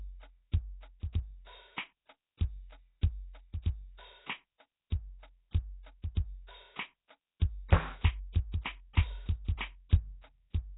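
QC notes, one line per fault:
Throughout: Nellymoser compression. The music carries a rough, hissy halo and a smeared, underwater blur across the whole clip. Nothing reaches above about 3.9 kHz, so the top end is simply gone. The damage is heavy. It likely comes from the old Flash microphone codec, which fits a rate near 16 kbps. That coder spends a fixed, tiny bit budget on short blocks. Weak bands get no bits and are refilled with noise, hence the hiss and smear.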